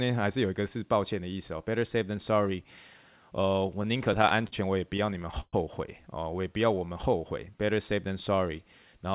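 Speech carried over a narrowband call path, with nothing above 4 kHz, consistent with G.711 A-law. Two bursts of repeated stalls (stutter) run from 3.97 to 4.54 s and from 4.97 to 5.55 s, six gaps each. The jitter buffer kept running dry, and the receiver stretched the last sound over each gap, up to 122 ms in the second burst, where concealment fills about 30% of the span. Unlike dropouts, nothing is lost: the speech drags and hiccups rather than skipping. From 6.41 to 7.66 s a jitter buffer slow-down repeats pitch periods to rebuild its reserve, adding 127 ms and playing at 91% speed. The pitch stays put, which separates it from a tape-style slowdown that would also lower the voice.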